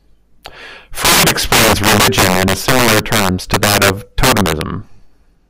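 Integer overflow runs throughout the speech: the signal is pushed roughly 14 dB past full scale, and around 7 percent of samples exceed the limit. Instead of clamping, those peaks wrap to the opposite sign, producing violent cracks on louder syllables, far harsher than clipping.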